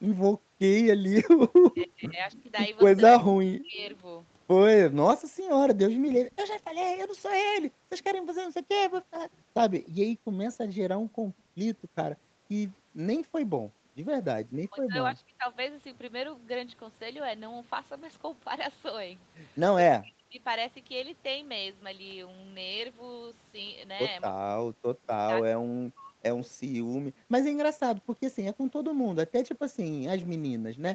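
Right at the start, from 0.36 to 0.59 s, the background gets gated by the echo canceller. The room sound drops by about 40 dB for a moment while the far end's audio plays, then comes back once the canceller lets go.

From 1.59 to 3.87 s you get speech suppressed in double talk. The talker dips hard, roughly 40 dB at worst, likely because both sides were talking and the canceller ducked everything. Inside that, from 2.31 to 3.23 s, there's an echo leak: a faint copy about 30 dB down, trailing 294 ms behind. That's likely loudspeaker pickup the far end's canceller didn't fully remove.

The gating comes back over a longer stretch, 5.3 to 13.97 s, with the background pumping in and out, again about 40 dB at its deepest. Within that, a second echo leak runs from 6.3 to 9.88 s. It's fainter, around 40 dB down, with the same 294 ms lag. Double-talk suppression also ducks the talker from 8.69 to 9.46 s.

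More double-talk dropouts follow at 14.46 to 15.46 s, 19.96 to 20.41 s and 24.55 to 26.16 s, each ducking the talker by about 40 dB. From 26.61 s to the end, the background gets gated again, with dips of about 40 dB. Everything sits inside the call's 8 kHz Opus bandwidth.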